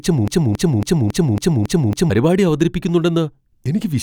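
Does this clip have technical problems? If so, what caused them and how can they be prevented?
Yes. From the very start until about 2.10 s, the speech is caught in a broken-record loop: a fragment of about 0.28 s plays seven times back to back, identical each time, and the loop is already running when the clip begins. The likely cause is a stall in the player, encoder or stream that kept resending the last piece it held, so the speech that belonged in those two seconds is gone. Buffer monitoring with stall detection that inserts silence or resynchronises, rather than repeating stale data, would prevent it.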